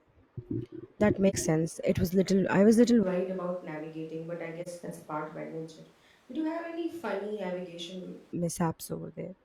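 At 1.29 s and again at 4.62 s there is AAC frame loss with muting: the decoder zeroes a missing stretch of about 43 ms, which points to a single lost frame. The overlapping windows fade it out and back in, so it is a brief dip, unlike a hard dropout.

From 3.03 s, right after "I was little", until 8.33 s, the sound turns roomy, hollow and thin, about 10 dB quieter, with room noise only about 30 dB below the speech. The likely cause is a switch to a distant microphone. Both changes are abrupt, which sets this apart from gradual movement away from the microphone.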